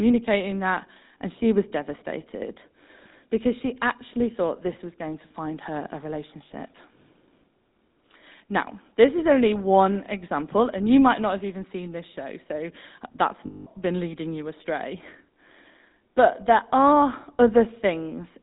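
The whole recording has the GSM full-rate codec's sound, and the damage is plainly audible. The speech has that buzzy, gravelly edge, consistent with the old 13 kbps full-rate coder. It models the vocal tract and feeds it a sparse, regularly spaced pulse train instead of the real excitation, so the fine texture of the voice turns rough. The top end also stops at around 4 kHz, which takes the air out of consonants.

Then there's a burst of lost GSM frames from about 13.46 to 13.67 s, right after "this show so that's" and before "been leading you astray". For roughly 200 ms, which fits about ten dropped 20 ms frames, the decoder had nothing good to work with. It kept repeating the last good frame. You hear the sound freeze into a metallic, ringing smear until real audio resumes.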